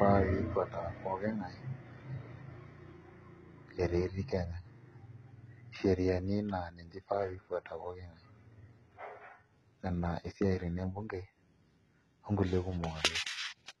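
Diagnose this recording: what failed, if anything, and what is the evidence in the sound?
The codec stage failed, throughout the recording. Nothing is heard above about 11.8 kHz, and the damage is heavy. This is likely HE-AAC compression. The treble is rebuilt from copied lower bands, so its harmonics miss the real ones. That fits roughly 16 kbps.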